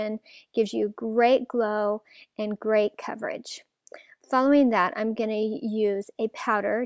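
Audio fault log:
No faults are logged for this audio.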